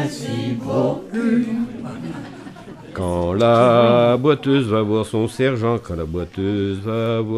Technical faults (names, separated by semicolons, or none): none